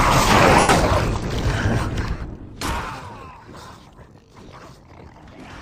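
At 0.60 s, lost LE Audio frames leave a 90 ms gap, consistent with about twelve 7.5 ms LC3 frames. The decoder conceals the gap by repeating the last spectrum with randomised phase signs, which turns tonal content into a noisy smear that decays as the gap continues.

From 1.92 s to 3.12 s, zipper noise accompanies a drop of about 25 dB. The level falls in unsmoothed 2 dB steps at around 10 per second, and each step adds a click, so the fade ticks.

A second frame loss at 2.17 s, lasting 37.5 ms, falls inside that fade. The lossy compression throughout the clip is light.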